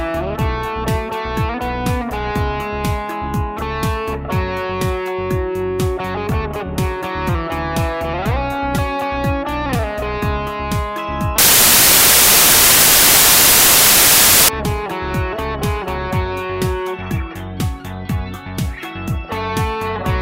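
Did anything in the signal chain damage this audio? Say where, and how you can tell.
Yes. From 11.38 s to 14.49 s the sample-format conversion fails: the samples are built from the wrong bytes, with a byte offset, swapped order or wrong alignment. The rapidly changing low-order bits end up as the most significant part of every value, so for about 3.1 s the audio turns into loud, harsh broadband noise. At 14.49 s the correct byte framing returns.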